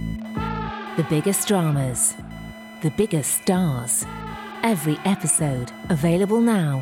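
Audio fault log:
throughout, computer activity noise: a buzzy, chirping whine pulsing at around 1 kHz sits roughly 25 dB under the sound, tracking the machine's workload rather than the audio, since processor, graphics or mouse load is modulating the shared ground in the audio circuit.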